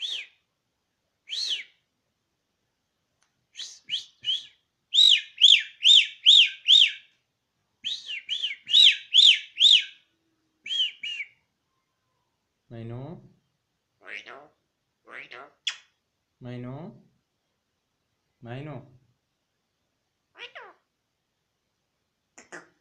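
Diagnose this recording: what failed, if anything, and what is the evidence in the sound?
A repeated buffer fault at the driver or buffer stage: a 20 ms block replays at 5.04 s (twice extra, until 5.08 s) and at 7.6 s (once), each with hard joins heard as a brief buzzy stutter. Unlike a dropout, nothing goes missing; late data made the device replay its last block.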